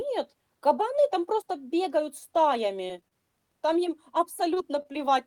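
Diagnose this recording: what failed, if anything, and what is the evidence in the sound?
The network path failed, with four short concealed packet losses at 2.87, 3.08, 4.54 and 4.92 s. At each, about 20 ms of speech never arrived, and the receiver bridged the gap by extending the preceding sound for roughly 16 to 28 ms before crossfading back. Each is heard as a brief smear or wobble. On a spectrogram, each shows as a short patch where the harmonics run flat or turn to diffuse noise, with a soft seam where real audio resumes.

A short stall from a late packet sits at 4.82 to 4.86 s. The jitter buffer ran dry, so the receiver held the current sound for about 21 ms until the packet arrived, then continued from the same point. No speech is lost, but that moment is audibly drawn out with a slight buzz or dip. In the waveform, a repeated, slightly decaying cycle pattern stretches the segment, and the spectrogram shows the harmonics frozen briefly in place.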